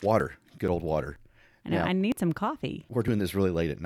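At 0.2, 0.68, 1.16, 1.64, 2.12, 2.6 and 3.08 s the speech skips abruptly forward, a regular pattern of audio missing between chunks. About 20 ms vanishes at each join, likely while the recorder closes one half-second block and opens the next.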